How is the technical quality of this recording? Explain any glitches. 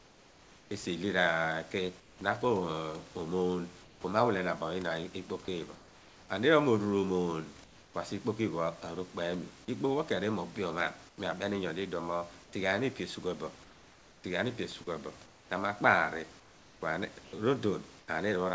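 The speech comes through a call path with nothing above 8 kHz, which fits G.722 at 64 kbps. Room noise sits about 26 dB below the speech. There's one recurring glitch, comfort noise in place of the background, at 0.0–2.21 s, 3.83–4.04 s, 5.75–6.29 s, 7.64–7.94 s and within 11.09–18.08 s. In the pauses the real background drops out for a smoother synthetic hiss, about 2 to 4 dB quieter where measurable, likely because the sender's voice detector stopped transmitting and the receiver filled in generated noise.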